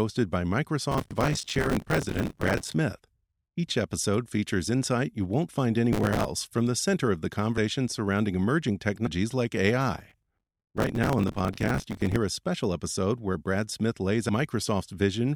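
Speech with bursts of gritty crackle tearing across the sound from 0.91 to 2.74 s, from 5.93 to 6.25 s (between "insight you won't find" and "from the center of"), and from 9.99 to 12.16 s. This is processor overload crackle: the processor repeatedly missed its deadlines for very short audio buffers, around 5 ms each, and replayed stale audio with hard edges in each gap. The audio jumps suddenly ahead at 7.56 s (between "the center of the" and "surrounding emerging"), at 9.05 s just after "surrounding emerging", and at 14.28 s. These are compressed frames skipped. About seven 26.1 ms frames, roughly 150 to 200 ms of audio, go missing each time.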